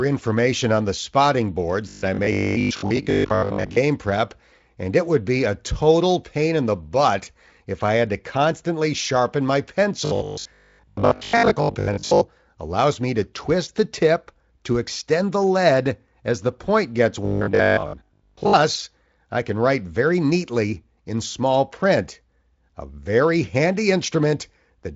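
From 1.89 to 3.79 s (after "on the spotting boards"), 10.05 to 12.23 s (after "to constantly sharpen my") and 17.25 to 18.53 s (after "as the point gets"), the speech becomes a rigid, metallic buzz at 50 Hz, the robotic sound from repeated short buffers. The likely cause is audio arriving too seldom, so 20 ms slices are looped while most of the real audio is skipped. On a waveform, identical 20 ms cycles repeat; a spectrogram shows evenly spaced 50 Hz harmonic lines replacing the normal speech harmonics, all below the clean 7.7 kHz ceiling of the Speex band.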